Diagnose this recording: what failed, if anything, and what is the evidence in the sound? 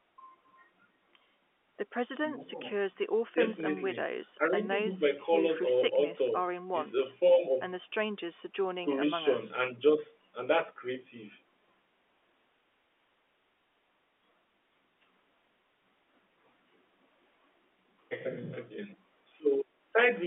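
Nothing failed: the speech arrives over an ordinary G.711 A-law telephone path, and the sound holds no evidence of any fault.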